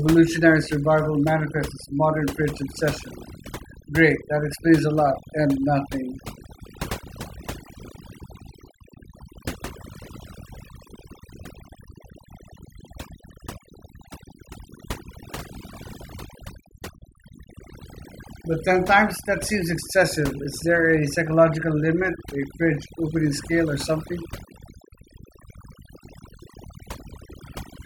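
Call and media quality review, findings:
Overdone noise removal, throughout. Noise suppressor set far too aggressive: bands near its noise estimate gated down or out, taking low-level speech detail with them. Result: near-silent background with twinkling specks, weak consonants and tails eroded. Probable component: denoise stage.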